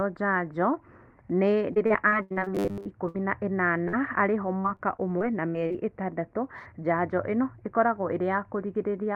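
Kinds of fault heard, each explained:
Repeated packet loss (robotic sound): From 1.73 to 3.16 s, eight separate holes open in the stream, the longest 81 ms, and each is bridged by extending the preceding sound before the next hole arrives. About a quarter of that stretch is patched material. A second run from 4.61 to 5.76 s has seven shorter gaps, none over 40 ms, ending just before "ĩtandatũ njanjo ĩno ĩkoragwo". Both stretches come across as choppy speech with pieces dropped.
Robotic sound from repeated short buffers: Between 2.55 and 2.86 s the speech collapses into a rigid buzz at 100 Hz, which corresponds to a 10 ms segment being looped. Roughly two thirds of this stretch is repetition rather than new audio, while the rough shape of the syllables still comes through. This is likely audio arriving too infrequently, with the playout filling the time by recycling the last short block.
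Short concealed packet loss: At about 3.84 s roughly 20 ms of audio failed to reach the decoder in time. The receiver synthesised a short continuation of the preceding sound and then crossfaded back into the real signal. The result is a brief smear or wobble lasting only a few hundredths of a second. It leads directly into the larger dropout that follows.
Burst of packet loss: Immediately afterwards, from 3.88 to 3.95 s, about 40 ms of consecutive audio is lost. The receiver carries the last sound forward for around 47 ms, letting it decay as the gap runs on, so a held buzz or fading hiss stands in for the missing material. When the signal returns, playback jumps ahead and the content in between is simply absent.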